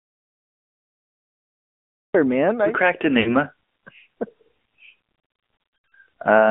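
The clip opens in an audio dropout to silence. From 0 to 2.15 s there is nothing at all, not even room tone. The likely cause is a lost input while the recorder kept writing zeros. Sound returns abruptly on "man I".

Throughout, the speech carries AMR narrowband mobile codec damage. The band runs only from about 150 Hz to 3.4 kHz, so the sound is thin and boxed in. The codec rebuilds the voice from a vocal-tract model, leaving a plainly audible buzzy, synthetic edge. That fits a mid bitrate near 10 kbps.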